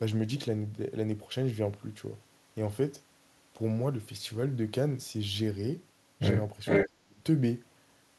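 At 6.65 s a delayed copy of the speech comes back for a short scrap lasting until 6.88 s, trailing the original by about 458 ms and sitting roughly 5 dB louder than the live voice. This is an echo leak: the far end is most likely playing the call on a loudspeaker, and its echo canceller let part of that playback back into the microphone and down the line.

Right as that echo scrap ends, from 6.86 s to 7.2 s, the speech itself sinks sharply, at its deepest by around 30 dB, and for about a third of a second it sounds gouged out and fragmented. This is speech suppressed in double talk. With both sides active at once, the canceller most likely could not tell the talker apart from the returning echo and pulled the level of everything down together.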